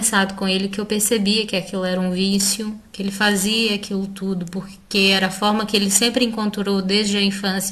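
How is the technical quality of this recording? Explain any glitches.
A single fault is audible. From 2.31 to 6.41 s there is a gritty, inharmonic fizz riding on the speech, roughly 20 dB below it. This is crude rate conversion: samples were repeated with no filtering, consistent with a 44.1 kHz to 48 kHz change.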